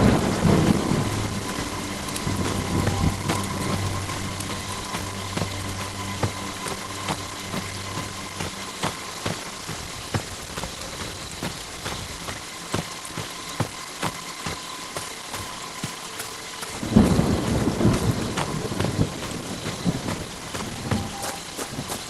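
From 3.16 to 4.55 s the audio hurries at unchanged pitch, about 7% fast. It's a jitter buffer speed-up: a tenth of a second of pitch periods trimmed to cut backlog.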